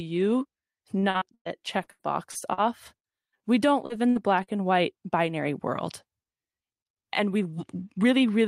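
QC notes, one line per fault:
0.99–1.61 s and 1.83–2.60 s, repeated packet loss (robotic sound): five gaps in each stretch, the longest 110 ms in the first, and every hole gets patched by stretching the last bit of sound, so it goes choppy. In the first stretch nearly half the span is filler, in the second about 29%.
2.97 s, 3.86 s and 4.43 s, short concealed packet loss: each time roughly 40 ms of audio never arrived and the decoder papered over it by carrying the previous sound forward and blending back in, giving a quick smear or wobble. The last one sits just before "and white binary world".
4.10–4.18 s, burst of packet loss: a longer gap to fill, bridged by continuing the last sound and fading it, so you hear a brief held buzz or hiss before things pick up again slightly further along, with a bit skipped and the timing nudged by about 17 ms.
7.53–8.14 s, jitter buffer speed-up: the receiver had built up too much buffered audio and trimmed it back by cutting out tiny pitch-period slices, around 50 ms in total. 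Speech runs about 8% fast here with pitch unchanged, so it sounds a little rushed.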